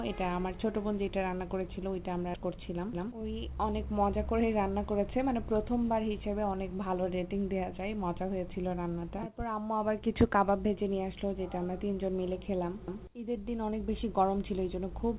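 At 2.34 s the audio makes a skip ahead. About half a second is dropped, and playback jumps straight across the gap with no fill. From 2.43 to 3.39 s comes a jitter buffer speed-up. The buffer was over-full, so short pitch-period slices were cut, trimming a few tens of milliseconds. The sound runs about 7% faster at unchanged pitch, slightly hurried. The G.711 mu-law call path leaves nothing above 4 kHz.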